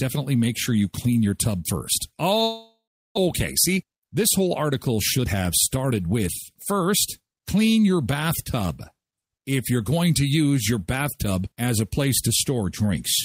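At 2.43 s the speech stops and is replaced by a continuation of the last sound that decays into a buzz, then about 0.36 s of silence, before audio resumes at 3.28 s with roughly 0.4 s of the original missing. This is most likely a long network dropout: packets stopped arriving, the receiver concealed the gap as long as it could, and the stream picked up later without the lost section, leaving a large rise in delay.

Three jitter buffer speed-up passages follow as the receiver works off that added latency: 3.68 to 4.24 s at 112 % speed, 5.18 to 6.24 s at 117 %, and 6.72 to 7.37 s at 106 %. In each, short pitch-period pieces are cut repeatedly, removing in total around 70 ms, 200 ms and 40 ms respectively. Pitch is unchanged, but the speech sounds hurried.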